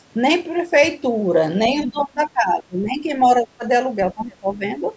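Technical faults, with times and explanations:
1.79–2.02 s, other side's voice leaking through: a faint second voice, roughly 20 dB under the talker, slips through briefly, likely echo the canceller didn't fully remove.
1.84–3.09 s, 3.27–3.64 s and 4.14–4.65 s, speech suppressed in double talk: the voice ducks hard in the first and last stretches, only slightly in the middle, likely from the canceller turning both sides down at once.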